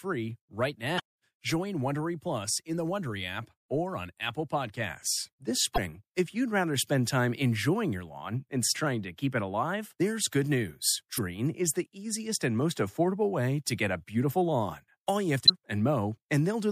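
It's speech with five brief glitches of damaged data in a compressed stream, at 0.96, 5.74 (just before "if you'd rather spend"), 8.71, 11.14 and 15.45 s, each a roughly 45 ms glitch where the decoder lost sync on corrupted frames.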